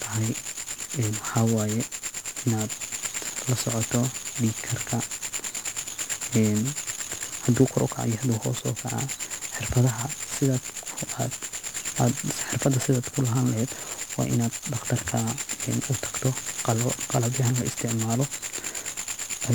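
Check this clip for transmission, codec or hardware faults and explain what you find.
One codec fault runs through the whole speech recording: 1-bit DFPWM compression. Throughout, each sample is reduced to a single up-or-down step on an adaptive level, leaving dense broadband fuzz and crackle with treble buried in hiss. That constant fuzzy grain, rather than the swirly, watery artefacts of low-bitrate MP3, marks it, and the heavy damage fits a roughly 48 kbps stream.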